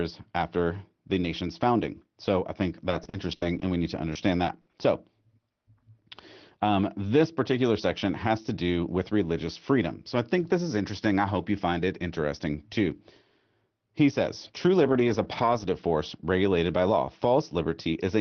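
From 2.89 to 4.75 s there's repeated packet loss with that robotic sound: nine gaps, the longest 60 ms, and about 280 ms in all patched by stretching the last bit of sound. That's roughly 15% of the stretch, so it comes out choppy, with pieces missing.

Later, from 14.83 to 15.71 s, around "says true" and "force regulated by law", comes a run of seventeen lost packets rebuilt from error correction, each 20 ms. The decoder played the low-bitrate backup copies, so there are no holes, but those slices sound rougher and noisier.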